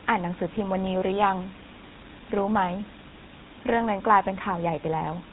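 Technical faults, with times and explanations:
Throughout, GSM full-rate codec: the speech passes through the original GSM vocal-tract model, driven by sparse regular pulses at a rate that fits about 13 kbps, with nothing kept above 4 kHz. This leaves a plainly audible buzzy, gravelly roughness over dull, band-limited speech.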